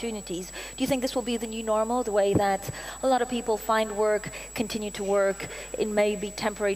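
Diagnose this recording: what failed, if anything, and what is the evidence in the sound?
A switching power supply feeding the analogue stage is running in an audible burst mode or beating with another one, putting a switching supply whistle on the sound from start to finish: a high tone wandering between about 7.76 and 7.89 kHz, roughly 15 dB below the signal.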